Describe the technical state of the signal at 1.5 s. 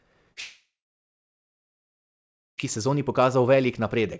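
Silence holds at 1.5 s, inside a stretch from 0.40 to 2.60 s after a brief fading buzz; a long network dropout likely cut the incoming audio there.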